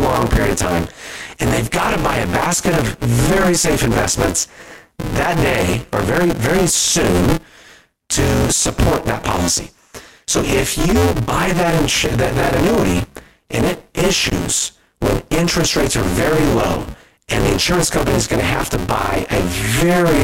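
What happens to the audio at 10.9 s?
At 10.9 s the speech carries a steady robotic buzz at 172 Hz, present throughout the clip whenever there is signal. This is buffer tearing: the writer and reader of the ring buffer cross mid-period, so roughly half of each buffer replays audio about 20 ms old, which fits a 256-sample buffer.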